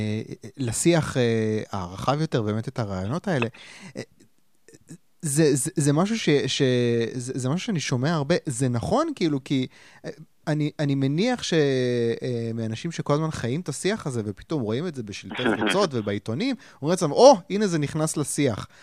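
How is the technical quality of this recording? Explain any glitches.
No glitches turn up anywhere in this speech recording. There are no dropouts, clicks or other breaks in the sound to point to.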